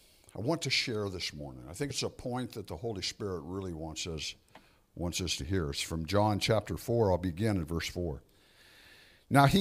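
At 1.90 s and again at 5.40 s the speech lurches forward slightly, as if a sliver of it has gone missing. That's compressed frames skipped: the decoder never played a chunk of the encoded stream, either because it wasn't in the file or because it was rejected as damaged. Each jump loses roughly 30 ms, which fits one dropped frame of about 26 ms. Since adjacent frames overlap, the seam comes out as a quick smeared blip rather than a sharp click.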